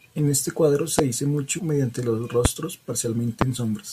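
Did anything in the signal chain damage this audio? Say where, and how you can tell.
Yes. Loud pops occur at 0.99 to 1.01 s, just after "este cuadro", then at 2.45 to 2.48 s and 3.41 to 3.44 s. Each is a single sharp pulse about 20 dB above the speech, which continues underneath. These are likely voltage steps entering the analogue wiring or a switch.

Compressed frames were skipped at 1.58 to 1.60 s, at the codec or storage stage. The speech jumps forward by roughly 70 ms, about three frames.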